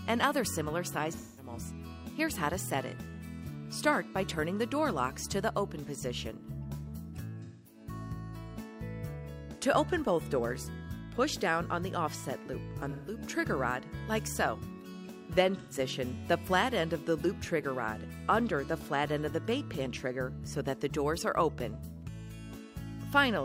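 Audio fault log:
1.16–15.78 s, AAC frame loss with concealment: four short gaps at 1.16–1.53 s, 7.43–7.80 s, 12.89–13.17 s and 15.58–15.78 s, lasting about 0.21, 0.21, 0.17 and 0.13 s, which fits runs of five, five, four and three lost frames. The decoder covers each gap by re-synthesising the last good spectrum with scrambled phase or interpolated energy, so the audio turns briefly smeared, noisy and phasey before clean decoding resumes.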